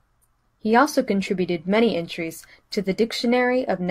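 No technical faults can be heard anywhere in the recording.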